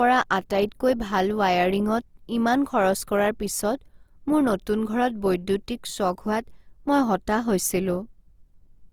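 Throughout, the speech sounds grainy and rough rather than swirly like MP3, which fits likely Opus compression in music mode near 24 kbps, reaching 20.3 kHz.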